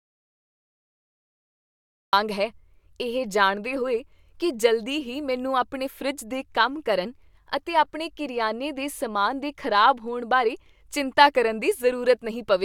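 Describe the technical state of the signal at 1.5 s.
At 1.5 s the signal is inside an audio dropout to silence that is already under way when the clip opens and lasts until 2.13 s. The input feed was likely lost, through a disconnected device, a broken link or a mute, while the recorder kept writing silence. The result is dead silence with no room tone at all, and the speech then cuts in abruptly at "ਹੈ ਇਹ ਜਾਣਦੇ ਹੋਏ".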